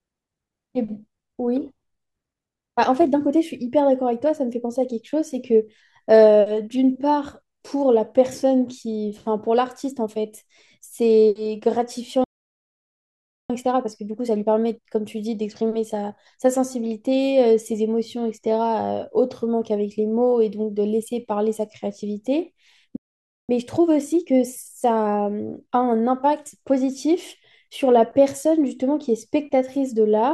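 At 12.24 s the speech cuts off in a playback stall lasting about 1.25 s, until 13.50 s, likely because the player ran short of buffered data or its thread was blocked. The waveform drops to a flat line and the spectrogram shows a blank vertical gap.

From 13.50 to 16.50 s comes time-compressed catch-up: the player drains its backlog by cutting and cross-fading short slices, so the speech runs 1.15 times fast at unchanged pitch. The spectrogram shows compressed syllable spacing and small splice discontinuities.

A second playback stall falls at 22.96 s and lasts about 0.53 s, to 23.49 s. It shows the same flat-line gap. Catch-up then hurries the speech at 1.15 times from 23.49 to 26.49 s.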